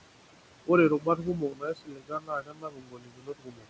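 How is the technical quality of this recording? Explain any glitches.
The technical quality is compromised by heavy noise reduction that also eats into the speech itself. The room noise, sitting about 11 dB below the speech, is an ordinary part of the recording. Nothing comes through above 8 kHz, which fits a wideband call codec such as G.722.

Noise suppressor artifacts run through the whole clip. The background sinks sharply in the pauses and swells back under the speech. A suppressor judged the room noise to be steady and pulled those bands down by about 21 dB, frame by frame.

Speech cut by the noise suppressor affects the stretch from 0.99 to 3.67 s, about two seconds in total. Parts of the speech turn faint and swallowed, dipping by up to about 22 dB. The suppressor mistook quieter speech energy for noise and turned it down along with the background.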